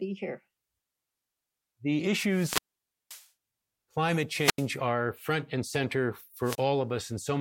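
Wireless microphone squelch dropouts hit this speech at 2.25–3.28 s, 4.32–4.71 s before "are front and center", and 6.42–6.64 s after it. A fading radio signal trips the receiver's squelch, muting about 0.53 s, 84 ms and 29 ms.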